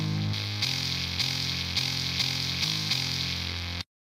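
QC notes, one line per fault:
0.33 to 4.04 s, pre-emphasis left on: the treble boost never got its matching cut, so 10 kHz sits about 11 dB above 1 kHz, bright and thin.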